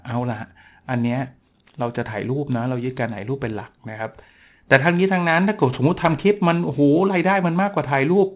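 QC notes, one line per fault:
Throughout: aliasing. The speech was resampled down to what sounds like an 8 kHz rate with no anti-alias filter first, so energy above 4 kHz folds back below it at roughly 25 dB under the signal, making sibilants gritty and metallic with the spectrum packed hard up to the 4 kHz edge.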